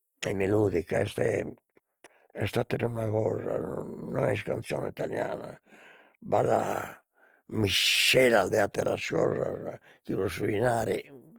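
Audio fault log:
Throughout: Opus compression. The speech has a grainy, rough texture, and its tonal parts turn noisy rather than clean. The damage is plainly audible. The bandwidth stays full, with content reaching about 20.2 kHz. That points to the music (CELT) mode at a low rate, likely around 24 kbps. The encoder keeps each band's energy. When bits run short it fills the detail with noise or folded copies of lower bands. That gives grit rather than swirl.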